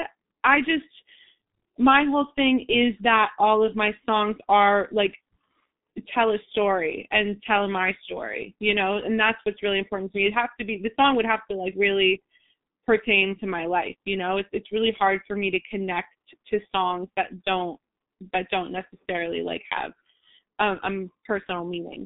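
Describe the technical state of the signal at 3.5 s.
At 3.5 s the speech carries G.723.1 codec damage, present throughout: heavy low-bitrate coding, roughly 6 kbit/s, leaves muffled, hoarse speech, and a spectrogram shows nothing above 3.8 kHz.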